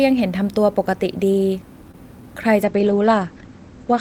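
A speech clip with two faults. From 1.91 to 1.96 s there is a short stall from a late packet: a packet arrived late, the jitter buffer ran dry, and the receiver stretched the last sound by about 22 ms before resuming where it left off. Nothing is lost, but playback ends up 22 ms later. On a spectrogram the harmonics run flat and smeared for that stretch. From 2.66 s to the end, a call bitrate drop takes the encoder from 32 to 12 kbps, and the sound turns coarse and muffled. The spectrogram shows energy cut off sharply above 8 kHz, where it had reached 20 kHz, with blotchy, smeared detail below.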